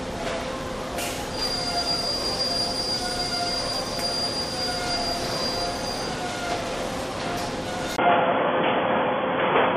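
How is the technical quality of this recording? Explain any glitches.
The recording has one clear fault near the end. From 7.96 s to the end, after a 20 ms gap, the sound turns dull and band-limited. This is likely an input switched to a poorer device, one passing nothing above 3.4 kHz, with a level shift of roughly 5 dB and a new noise floor around 40 dB down. A spectrogram would show the upper band cut off flat, and the waveform a brief dropout.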